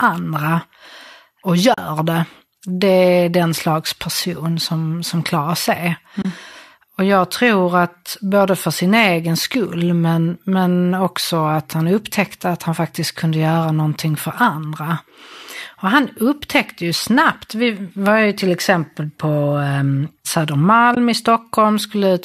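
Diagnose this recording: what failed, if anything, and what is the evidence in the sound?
AAC frame loss with muting, at the network and codec stage: soft gaps at 1.74–1.78 s (before "det det är den"), 6.22–6.25 s and 20.95–20.97 s. Their 40, 30 and 20 ms lengths fit whole 10 ms frames, likely from low-delay AAC, that the decoder zeroed. A spectrogram shows blank vertical bands, and the waveform tapers smoothly to silence.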